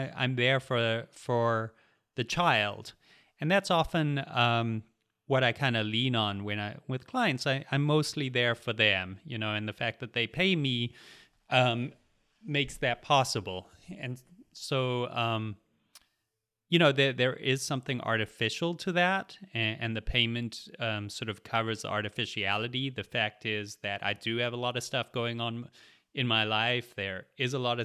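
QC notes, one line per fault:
Nothing to flag here, as I couldn't hear any fault anywhere in the speech.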